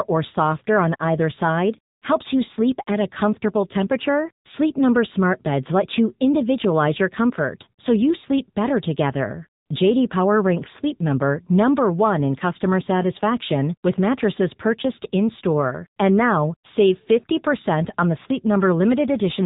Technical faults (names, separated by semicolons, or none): AMR narrowband mobile codec